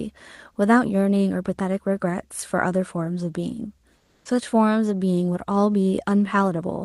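From 3.97 to 4.25 s, roughly 280 ms, the real background drops out and comfort noise in place of the background takes over: a flat, detail-free hiss about 5 dB quieter, likely Opus DTX pausing transmission while the receiver synthesises filler noise.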